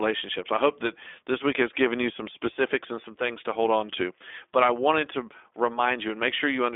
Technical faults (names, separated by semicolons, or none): iLBC codec